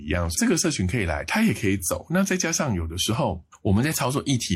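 No technical fault can be heard anywhere in the recording; the speech signal stays continuous and stable throughout.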